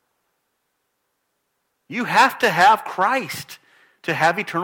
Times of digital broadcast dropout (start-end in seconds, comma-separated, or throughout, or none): none